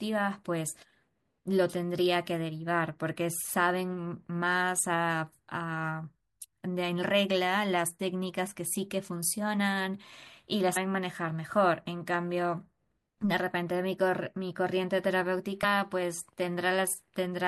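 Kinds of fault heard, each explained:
Damaged data in a compressed stream: part of the encoded speech stream is corrupt, so the decoder misreads those frames and loses sync until it finds the next frame header. This causes a brief glitch from 10.73 to 10.77 s and a short glitch at 15.63 s.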